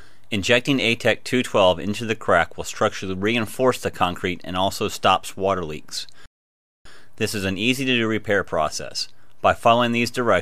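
At 6.26 s the sound just cuts out and stays silent until 6.85 s, roughly 0.59 s of dead air, before carrying on. That's a playback stall, most likely the player running dry of buffered data or its thread getting blocked briefly.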